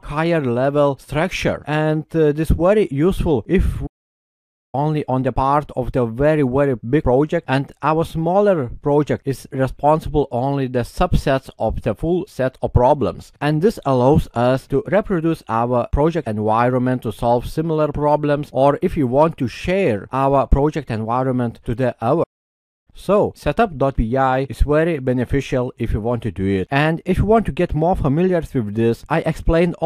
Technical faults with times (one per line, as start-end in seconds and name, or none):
3.86-4.75 playback stall
22.23-22.88 playback stall